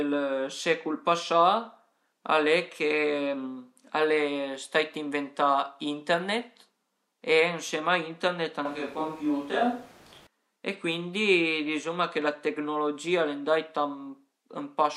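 From 8.65 to 10.27 s the speech abruptly turns roomy, hollow and thin, with noise about 25 dB below it, likely a switch to a distant microphone; the sudden change each way sets it apart from added reverb.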